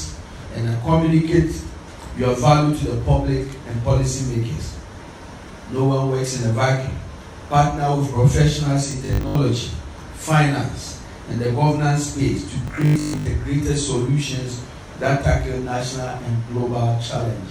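Robotic sound from repeated short buffers at 8.91–9.35 s and 12.68–13.28 s: a rigid 50 Hz buzz, likely from 20 ms buffers repeated to cover missing audio, roughly half then most of each stretch.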